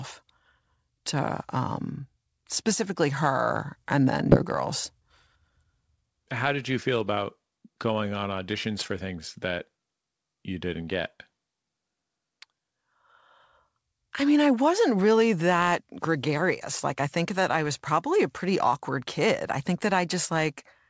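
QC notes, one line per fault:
4.32–4.44 s, skip ahead: a stretch of queued audio, roughly 0.4 s, was dropped to catch up with later packets already waiting. Playback leaps forward with no gap, and the sound on either side is joined almost directly.
5.00–6.04 s, jitter buffer speed-up: holding more audio than its target, the receiver repeatedly cut short pitch-period pieces, about 150 ms in total. This passage therefore plays at 112% speed with unchanged pitch and sounds hurried.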